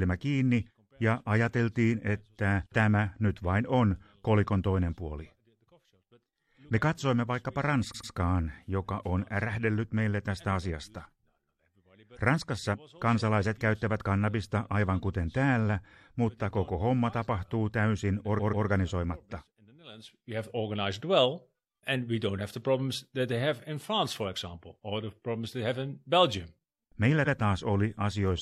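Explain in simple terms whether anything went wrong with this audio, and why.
The speech stutters three times because of repeated frames: short stretches of the compressed file were stored more than once, so the player plays the same slice again. At 7.90 s, right after "katsoimme vaikkapa", a 93 ms chunk plays two extra times. At 18.35 s, after "koko homma tapahtuu täysin", a 139 ms chunk does the same. At 27.22 s a 93 ms chunk repeats once. The clip ends up slightly longer.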